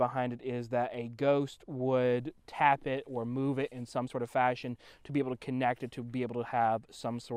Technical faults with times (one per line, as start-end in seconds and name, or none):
0.29-0.39 DAB burbling